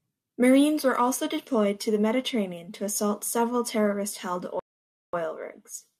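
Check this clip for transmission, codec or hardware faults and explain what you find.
One transmission fault stands out. Bluetooth stall, 4.60 to 5.13 s: delayed packets likely emptied the headphone buffer, so the speech cuts to 0.54 s of silence, then picks up again.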